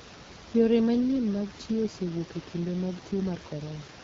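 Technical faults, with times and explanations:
Throughout, AMR wideband (HD Voice) codec: the speech passed through an AMR-WB encoder at 8.85 kbit/s, the second-lowest rate, where the pulse-driven vocal tract model has too few bits for its excitation. The speech comes out rough and raspy, with audible coding damage, and the band from 6.4 to 7 kHz is filled with shaped noise, not real detail. Room noise sits about 16 dB below the speech.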